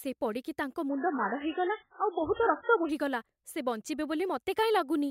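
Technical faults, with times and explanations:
0.89–2.89 s, adaptive stream at a lower bitrate: the speech suddenly loses everything above 3.7 kHz and turns smeared and warbly, then snaps back with no gap at either edge. The sound fits a switch from a high-quality MP3 down to a very low-rate one.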